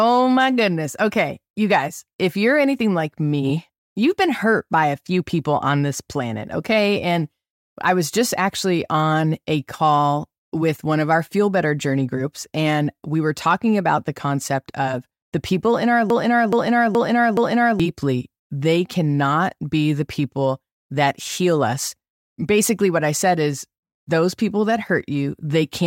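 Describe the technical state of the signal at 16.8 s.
A broken-record loop runs from 16.10 to 17.80 s: a fragment of about 0.42 s repeats exactly, back to back, four times. The likely cause is a stalled player or stream resending its last buffered piece, so the speech that belonged there is lost.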